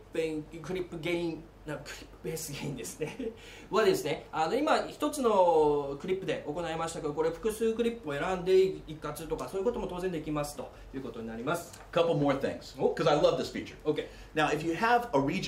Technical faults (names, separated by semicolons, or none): none